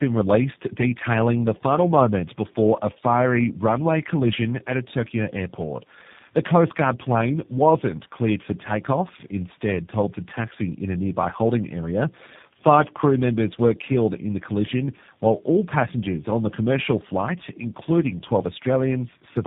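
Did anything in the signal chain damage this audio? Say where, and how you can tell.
Yes. Tandem speech coding runs throughout the speech, at the codec stage. The audio sounds rough, muffled and warbly, with nothing above about 3.7 kHz. The roughness is heavier than a single narrowband coder would leave, which points to about three speech codecs in sequence, the last fitting G.729A. Each border decodes the signal and codes it again, so every coder models the previous coder's errors as if they were speech, and the artefacts build up.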